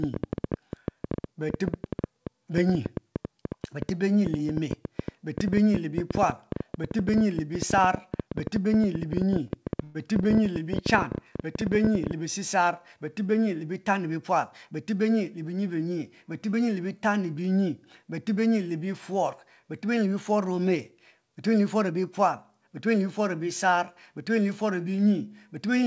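From 0.04 to 12.12 s a train of clicks ticks through the speech and its pauses, irregularly spaced at about 11 per second and peaking around 10 dB above the signal. The clicks are alike in shape, unlike random crackle, which points to interference as the likely source.

At 9.48 to 9.52 s a short stall from a late packet holds one sound for 20 ms with a faint buzz or dip. Nothing is lost, and it is briefer than a freeze.

From 9.84 to 9.97 s a call audio freeze, likely from delayed packets, stretches the last sound into a fading buzz or hiss lasting 107 ms. It never reaches silence, and the speech resumes intact.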